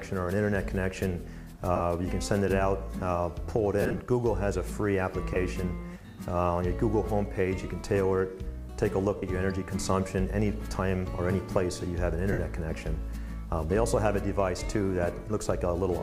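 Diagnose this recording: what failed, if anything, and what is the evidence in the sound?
The fault is in the wireless link and codec stage, as lost LE Audio frames. There are short smeary dropouts at 1.76 s (about 38 ms), 5.34 s (23 ms), 9.17 s (53 ms) and 12.32 s (60 ms). At 3.82 s there's a rougher patch, about 120 ms of gaps scattered over 180 ms, with no run longer than around 40 ms. The LC3 decoder fills each gap by repeating the last spectrum with random phase, so tones smear into noise. Those lengths fit whole 7.5 ms frames going missing.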